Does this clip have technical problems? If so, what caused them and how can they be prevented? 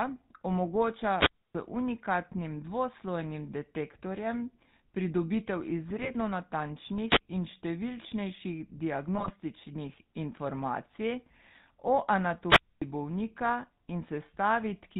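Yes. The speech went through the GSM full-rate codec, which rebuilds the voice from a vocal-tract model driven by a sparse pulse train and drops everything above 4 kHz. Throughout, this leaves a buzzy, gravelly, muffled sound that fits the 13 kbps full-rate mode. Using a wideband codec instead prevents it.

GSM bit errors strike from 5.90 to 6.11 s and from 9.14 to 9.31 s. Corrupted bits scramble the decoder's filter, pitch and gain values, so the voice breaks into squawks, pops and gargling. A stronger radio link or better error protection prevents this.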